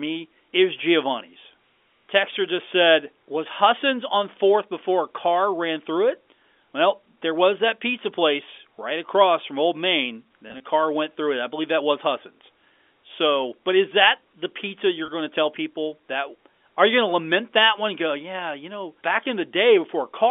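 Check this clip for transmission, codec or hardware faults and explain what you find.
Two brief dropouts from packet loss with pitch repetition occur in this speech, which comes over a G.711 telephone band of roughly 250 Hz to 3.5 kHz.

From 10.48 to 10.64 s, just before "car went through it", about 80 ms goes missing in scattered 20 ms runs. The receiver repeats the last pitch period to fill each gap, giving a brief buzzy flutter.

From 15.06 to 15.08 s, between "is that the pizza" and "going to tell people", a single 20 ms loss is bridged the same way. It sounds like a momentary held buzz.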